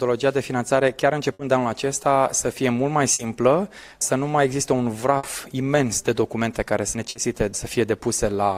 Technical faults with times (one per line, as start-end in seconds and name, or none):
1.33-1.42 burst of packet loss
3.13-3.22 burst of packet loss
5.17-5.26 burst of packet loss
7.09-7.18 burst of packet loss